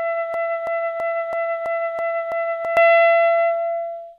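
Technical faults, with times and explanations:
0.34–2.77 s, broken-record loop: A fragment about 330 ms long repeats exactly, back to back, seven times. The audio that belonged in that stretch never plays. The likely cause is a stalled player or stream resending the last piece it held.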